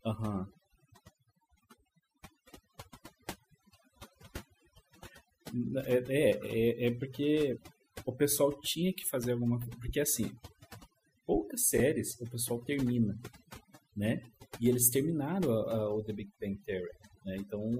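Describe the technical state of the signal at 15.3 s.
At 15.3 s the speech is under overdone noise removal, present throughout the clip. Bands near the noise estimate are cut away with quiet speech detail, leaving a lowered background that breaks up into twinkling, warbling specks; a spectrogram shows scattered isolated blobs and holes.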